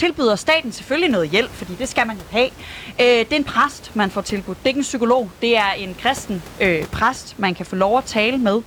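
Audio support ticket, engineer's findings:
No system faults found in the speech signal; only the room's own background noise is audible, sitting about 21 dB below the talker and belonging to the recording rather than to the audio path.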